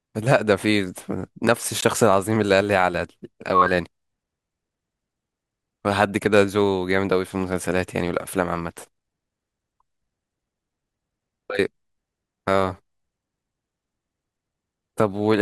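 A block of digital silence at 1.81 s: about 16 ms of the speech drops abruptly to silence and back, leaving a short hole.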